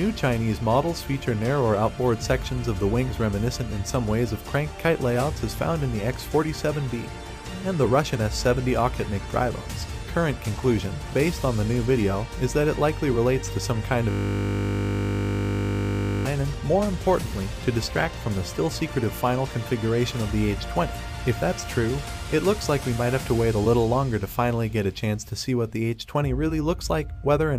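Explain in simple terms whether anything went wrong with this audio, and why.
Something did go wrong, from about 14.1 to 16.3 seconds. That's a system hang loop: the computer or its audio driver froze, but the sound hardware kept replaying the last small chunk it had been given. Here the chunk is only 20 ms long, so it repeats 50 times a second for just over two seconds, roughly a hundred passes. Looped that quickly, it comes across as a steady buzz rather than a stutter.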